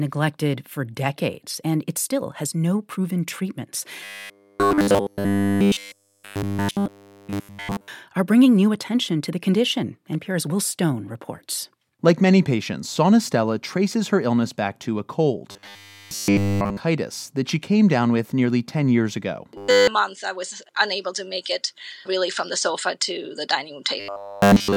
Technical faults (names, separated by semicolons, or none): robotic sound from repeated short buffers